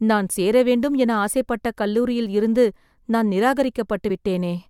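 Compressed frames skipped at 4.09 s in this speech recording: the audio jumps forward by roughly two frames, losing around 50 ms of sound, which fits a frame length of 23.2 ms. The frames were either missing from the stream or rejected by the decoder as corrupt, so playback resumes further along.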